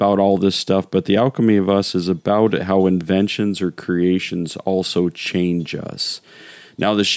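Throughout the clip, the input gain is likely set too high, so a fast limiter pulls it down on every loud moment. This gain pumping makes the level swing by around 5 dB, squashing its dynamics.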